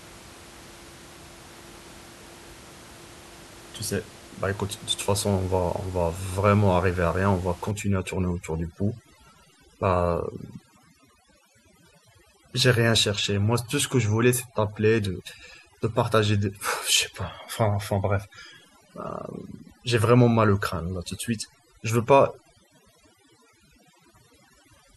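From about 7.71 s right to the end, there's overdone noise removal: the denoiser is clamping bands it mistakes for noise, so the room noise, about 22 dB under the speech before that, drops and breaks up into twinkly specks.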